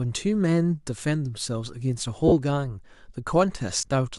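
Lost LE Audio frames twice: 2.28 to 2.32 s, a single 40 ms hole, and 3.78 to 3.88 s, about 70 ms scattered over 100 ms, longest run around 30 ms. The LC3 decoder refills gaps with the last spectrum, signs randomised, so speech blurs into brief noisy smears.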